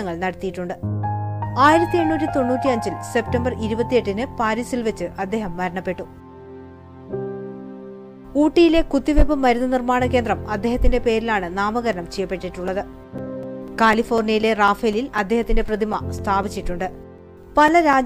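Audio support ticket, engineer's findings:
Periodic USB or driver dropouts, 11.93–17.93 s: regular ticks every 0.25 s, roughly 30 in all, each a gap of a few milliseconds filled with silence. Likely a background task stalling the bus or driver. Fixed spacing separates this from random buffer underruns.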